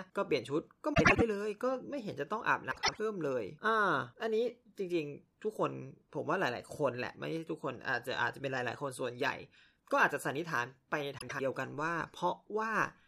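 Frames out of order occur at 0.94 to 1.22 s, 2.71 to 2.99 s, and 11.18 to 11.41 s. Two adjacent runs of frames play swapped, each about 0.1 s, which fits four frames per run. The speech briefly flutters and garbles. No time is lost.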